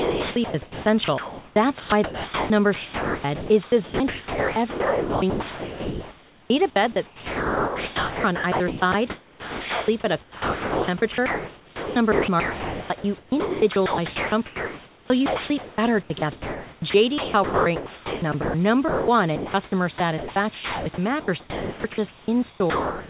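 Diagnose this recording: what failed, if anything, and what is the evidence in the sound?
Call processing: the sender's voice detector, likely misjudging quiet speech as background, kept switching transmission off and on. The result is speech chopped by the voice detector at 0 to 6.5 s, 6.92 to 9.88 s, 10.22 to 18.54 s and 19.98 to 23.09 s. Choppy syllable edges give way to synthetic comfort noise.

Call processing again: the detector likely took speech for background and stopped sending twice, so the receiver filled in comfort noise. This is speech dropped by the voice detector at 18.88 to 19.08 s, losing about 0.19 s, and at 19.36 to 19.54 s, losing about 0.1 s.

The receiver's comfort noise generator, likely fed only occasional background updates during a transmission pause, substituted synthetic noise for the real background from 19.36 to 19.72 s. That short stretch of room noise turns flat and featureless. 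The band-limited G.711-style call path, with nothing above 4 kHz, frames it.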